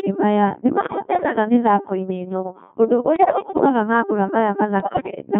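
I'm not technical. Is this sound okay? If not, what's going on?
No. The whole clip is speech passed through the Codec 2 vocoder, a digital-radio voice system that sends only a rough description of the voice and rebuilds it from tones. That is why it sounds robotic and buzzy throughout, unlike ordinary compression, which muffles or smears sound but keeps it human.

On top of that there are bit errors on digital voice radio, where corrupted data scrambles the rebuilt voice. From 0.84 to 1.36 s, just before "mĩthakoinĩ ĩno ũndũ", from 3.16 to 3.69 s, right after those same words, and most severely from 4.80 to 5.22 s, the voice jumps in pitch and loudness and turns into bleeps and warbling gibberish. A simple dropout would go silent instead.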